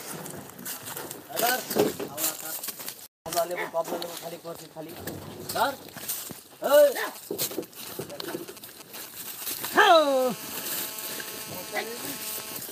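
The audio carries GSM signalling bursts from 7.07 to 9.53 s: a galloping dit-dit-dit of brief 217 Hz buzzes, roughly 15 dB below the signal. A nearby 2G phone is exchanging short groups of radio bursts with the network, and the audio circuitry rectifies them. From 9.72 to 12.58 s this becomes a continuous GSM phone buzz, a harsh, harmonic-rich 217 Hz rasp at about 13 dB below the signal. It is steady because the phone is now transmitting every frame, as it does during a call.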